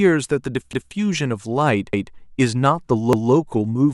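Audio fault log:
0.73–0.93 s, 1.93–2.13 s, 3.13–3.33 s: overlapping chunks. The speech was handled in blocks of 1.0 s, and each new block began 200 ms before the previous one finished, so that stretch of audio is played a second time at every join. At each of these three points the speech briefly jumps back and repeats itself, heard as a short stutter or click where the repeated piece butts against the sound before it.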